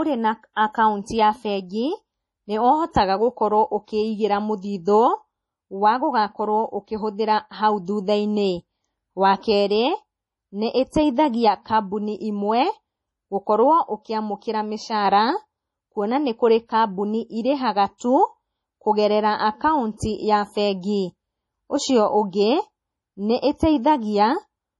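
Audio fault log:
throughout: MP3 compression, likely the cause of the heavy damage heard across this speech. Nothing survives above 11.5 kHz, a hard ceiling that shows on a spectrogram as a flat horizontal edge with empty space above it. Below that, weak frequency lines flicker in and out between frames, leaving patchy, holed texture in the spectrogram and a watery, swirly sound with metallic chirps on sibilants. That degree of starvation fits a very low bitrate, around 32 kbps.
19.97–20.00 s: pre-echo, a short hiss of about 28 ms leading into a sharp attack. The encoder spread the noise budgeted for the loud onset across the whole transform block, so it also filled the quiet moment just before the attack. In the waveform, a thin smear of low-level noise rises ahead of the transient instead of clean silence. A spectrogram shows a broadband haze reaching back from the attack's vertical edge, which leaves the onset sounding soft and blurred.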